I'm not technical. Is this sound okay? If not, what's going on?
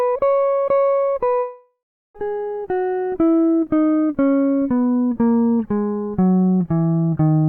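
No. From 1.39 to 2.16 s a long network dropout likely cut the connection: the music fades into a buzz, goes quiet, and returns missing a piece.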